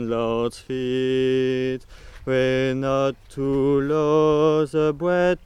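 Nothing technically wrong can be heard in the audio. There is no defect to place in time or trace to a cause.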